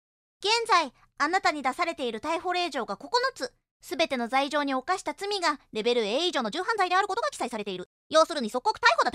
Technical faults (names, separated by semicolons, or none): time-stretched section